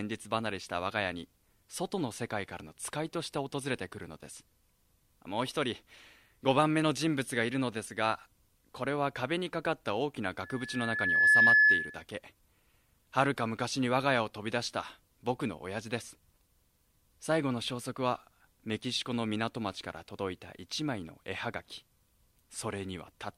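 From 10.42 to 12.04 s, loudspeaker feedback squeal: a 1.7 kHz tone swells over roughly a second to about 10 dB above the signal, as the mic–speaker loop gain exceeds unity.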